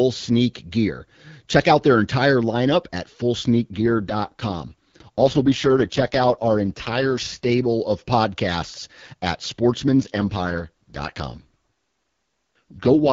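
From 3.78 to 7.52 s, ending just before "of podcasts at", and again from 10.0 to 13.12 s, right after "of podcasts at", there's an AMR rate drop. The speech turns rough and synthetic, with no gap or loss of bandwidth, which fits the AMR-WB link falling from 12.65 to 6.6 kbit/s.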